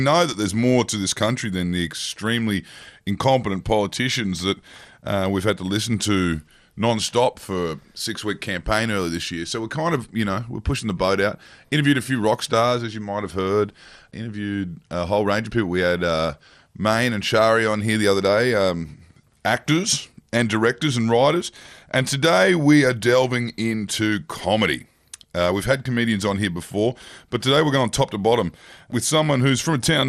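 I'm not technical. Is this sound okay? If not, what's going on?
No, not quite. The whole recording has a dull, muffled quality, with a gurgling, grainy texture clinging to the speech. That's most likely MP2 compression, an older way of shrinking audio files. It chops the sound into many narrow slices by pitch, and when it's squeezed too hard it drops the brightest slices and roughly approximates the rest. That's why the crisp top end is missing and the speech sounds bubbly, like low-quality digital radio.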